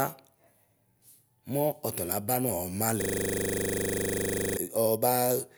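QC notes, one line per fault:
3.02–4.57 s, system hang loop: right after "mu ɔtalaba nu" the speech freezes into one 40 ms fragment replayed about 39 times. The host stalled while the sound hardware kept cycling the same ring buffer, so that slice of audio repeats exactly until playback recovers. At a 25 Hz loop rate the slice repeats 25 times a second, and the speech resumes only at 4.57 s.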